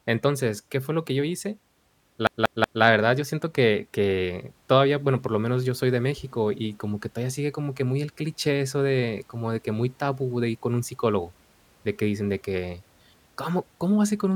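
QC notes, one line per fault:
2.27 to 2.83 s: CD stuck on one turn, a 186 ms slice repeats three times with clicks of mute at each jump, an even mechanical stutter, not a dropout, before "verdad yo siento que".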